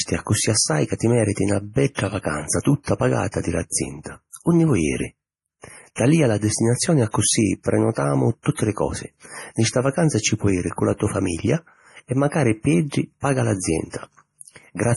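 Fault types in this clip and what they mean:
MP3 compression: watery, swirling texture and nothing above 11.4 kHz, likely from heavy lossy coding near 32 kbps; plain low-pass filtering would leave no swirl.
pre-echo: a short hiss precedes a sharp onset by 40 ms, from 2.83 to 2.87 s, softening it; unlike a click, the noise leads the attack.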